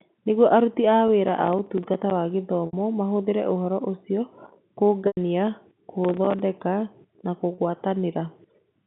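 Right after "aruti a", packet loss with pitch repetition at 1.08 s bridges a 10 ms gap by repeating the last pitch period, a brief held buzz. Processor overload crackle follows from 1.27 to 2.11 s: the processor misses a long run of roughly 5 ms buffer deadlines, each leaving a hard-edged silent gap, so the sound tears gritty rather than holding. More pitch-repetition concealment comes at 2.66–2.73 s (70 ms, just before "mahũthĩre ũhoro ũcio") and 5.07–5.17 s (100 ms), where the repeated cycle fades toward silence before speech cross-fades back. Crackle returns from 6.05 to 6.40 s, and a final 30 ms loss at 7.55–7.58 s is another smooth buzzy hold, not a burst of clicks. All of this rides on narrow 150 Hz–3.6 kHz G.711 telephone audio.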